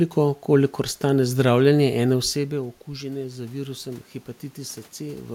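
At 2.1 s, just after "kolikor stane zdravljenje", the talker moves away and the input drops by about 13 dB. Automatic gain rising follows. The gain control slowly adds about 3 dB until 4.14 s. Voice and room noise swell together.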